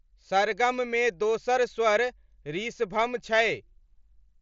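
Nothing's wrong here: it's just speech carried over a Bluetooth mSBC headset link, with the sound topping out around 7.6 kHz as that path normally does.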